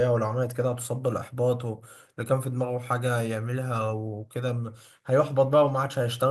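Nothing here needs flagging, as the recording runs its whole course without a single technical fault turning up anywhere.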